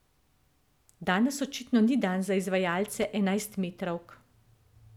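A speech recording with loose connector crackle from 2.85 to 3.05 s, just after "očitno ni dan za". A worn contact keeps breaking, chopping the signal into irregular scratchy pops.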